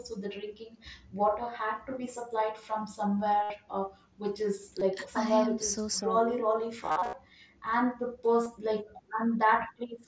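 Speech with brief buzzy, held-tone patches and small warbles at 3.43–3.50 s, 4.80 s, 8.43–8.46 s, and scattered across 6.83–7.13 s: concealed Bluetooth headset packet loss, with lost packets papered over by repeating recent waveform.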